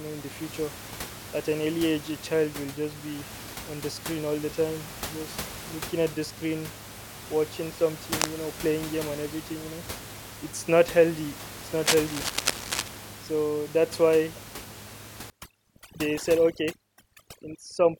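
At 8.11 to 8.30 s, between "at the screen watching" and "know playing game and", a burst of cable scratch noise cuts across the speech: dense, uneven crackling only a little below the speech level. It returns from 11.84 to 12.88 s, longer and at a similar strength. Both bursts are likely caused by a worn cable, connector or control being moved, so that its contact resistance jumps rapidly and injects ragged noise into the signal.

From 15.3 s to the end, overdone noise removal takes hold. The room noise, which sits about 13 dB below the speech before this point, drops and breaks up into twinkling specks. The reduction is set too aggressively, switching individual frequency bands down or off whenever they approach its noise estimate. The quieter components of the speech fall into those bands and are stripped out along with the background.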